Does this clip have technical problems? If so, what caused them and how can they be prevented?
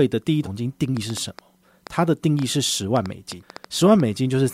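Yes. A train of clicks runs from 0.97 s to 4.01 s, likely caused by interference from nearby equipment or a faulty connection or power supply injecting short pulses into the signal path. Each pulse lands as a similar-sounding tick or pop, around fifteen in all at about 4.3 per second, spaced unevenly rather than on a steady beat. The pops peak a few decibels above the speech itself and keep ticking through the pauses. To prevent this, keep phones and other electronics away from the recording chain, use shielded cables, and make sure the interface has stable power and a reliable connection.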